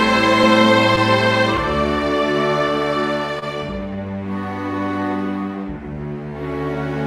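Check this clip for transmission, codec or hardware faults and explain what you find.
Two transport faults show up: clock drift running through the whole clip, plus one short stall from a late packet.

The clock drift between sender and receiver is there from start to finish. The sender's clock runs slow, by roughly one and a half percent, so the receiver's jitter buffer keeps draining faster than it refills. To keep up, the receiver repeats tiny slices of audio. You hear small, unevenly spaced timing hiccups and slight stutters throughout, never one big glitch.

The short stall from a late packet hits at 3.39 to 3.44 s. A packet didn't show up on time, so the buffer ran empty and the receiver stretched the last bit of sound for 27 ms until it arrived, then resumed from the same point. Nothing is lost, but that moment is held a touch too long with a slight buzz or dip, and everything after it plays about 27 ms later.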